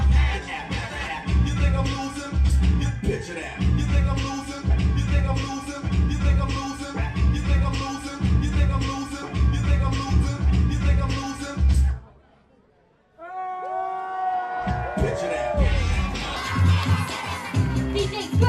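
From 16.36 s right to the end at 18.48 s, there's a section at the wrong speed. The last couple of seconds run about 1.36 times too fast, and because speed and pitch move together, everything jumps up by roughly five semitones and sounds hurried and chipmunky. The change hits abruptly rather than drifting in. The likely cause is an editor or player treating that stretch as if it belonged to a faster clock than the one it was recorded at.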